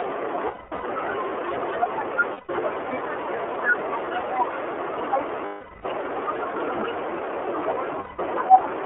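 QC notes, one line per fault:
throughout: iLBC codec. Plainly audible coding damage across the clip, with a narrow telephone band of roughly 300 Hz to 3.4 kHz and a slightly rough, synthetic edge. The figures fit 30 ms iLBC frames at 13.33 kbps, each frame's excitation coded independently of the last.
0.47–0.84 s, 2.33–2.49 s, 5.45–5.86 s, 8.00–8.19 s: lost iLBC frames. Each gap is filled by the decoder replaying the last pitch cycle blended with noise, heard as a held, buzzy vowel that fades on the longer losses. The first span is scattered over 360 ms, its longest run around 200 ms. Others last 150, 390 and 180 ms. Speech recovers almost immediately after each.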